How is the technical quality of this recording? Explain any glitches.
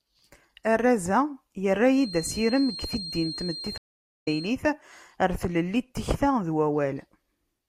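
Two faults mar the speech, one overlapping the other.

From 1.88 to 4.58 s, a loudspeaker-to-microphone loop likely sat at the edge of feedback, producing a feedback whistle: a thin, steady 4.2 kHz tone, well below the speech, wavering slightly.

At 3.78 s, a stream reconnect occurs. The connection dropped and the decoder restarted, leaving 462 ms of silence until 4.28 s. Speech then resumes roughly a third of a second further on.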